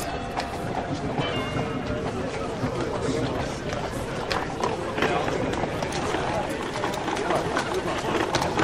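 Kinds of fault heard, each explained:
Wrong sample rate: from 1.33 to 5.68 s the sound is played back without conversion at a rate lower than the one it was captured at, so it runs at 0.919 times normal speed and sits 1.47 semitones lower, which fits 48 kHz material played at 44.1 kHz. Speed and pitch drop together by exactly the same ratio, which separates it from a pitch shift or a time stretch, where one changes without the other.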